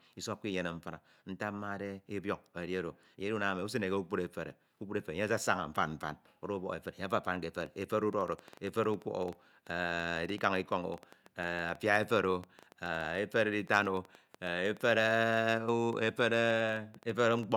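Speech, with a train of clicks from 7.61 s to 17.44 s: around a hundred sharp ticks, roughly 9.6 per second at uneven spacing, peaking somewhat above the speech and audible in pauses. They appear as thin vertical broadband lines on a spectrogram and narrow spikes on the waveform, likely from nearby interference or a faulty connection or power supply.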